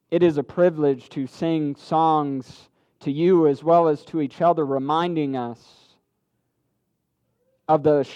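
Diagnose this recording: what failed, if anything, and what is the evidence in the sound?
The driver or buffer stage has most likely failed through clock drift buffer slips. Two devices appear to run on independent clocks that disagree by something on the order of 100 ppm, so the buffer between them creeps toward empty or full and then drops or repeats a handful of samples to recover. Each correction is heard as a short click at a steady 2.04 s interval, about four times between 0.53 s and 6.66 s.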